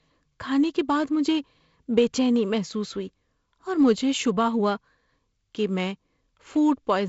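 Speech over G.722 wideband telephone coding, consistent with the 48 kbit/s mode, band-limited to about 7.7 kHz, with nothing to flag.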